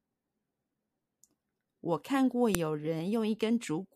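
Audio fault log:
2.55 s, file header played as audio: a single sharp, loud click in the speech, abrupt and unrelated to the sound around it. A second piece of audio was joined here with its WAV header intact, so those few dozen header bytes were played back as samples.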